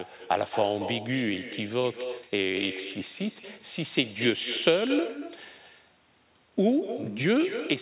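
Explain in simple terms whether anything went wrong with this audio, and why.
Throughout the clip there's an echo with no canceller: the far end's loudspeaker feeds the speech back into its microphone, so every phrase returns as a quieter copy about a fifth of a second later. Unlike room reverberation, it's a distinct repeat rather than a smear.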